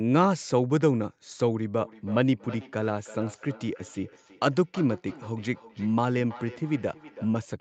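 From 1.79 s to 7.43 s the speech carries feedback echo between two devices: a second device in the room replays this microphone's signal, which is picked up again beyond its echo canceller's reach. Each phrase returns roughly every third of a second, thinner and ringing, peaking about 19 dB below the speech.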